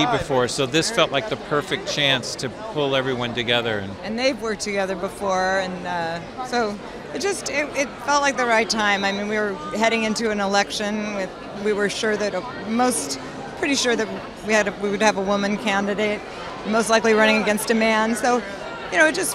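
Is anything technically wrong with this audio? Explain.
No, there's no technical fault.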